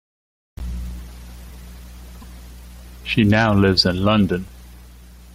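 Damaged data in a compressed stream hits this speech clip from 2.21 to 2.24 s, a brief blip of about 32 ms where corrupted bytes make the decoder misread or discard frames, lose sync, and hunt for the next valid frame header before the speech continues.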